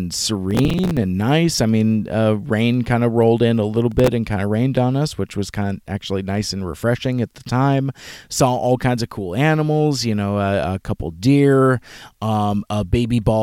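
From 0.51 to 0.97 s and again from 3.92 to 4.08 s, processor overload crackle tears through the speech. Missed processing deadlines replay stale audio in short chunks of about 5 ms, heard as gritty crackle. The waveform shows hard-edged discontinuities, and the spectrogram shows vertical broadband streaks.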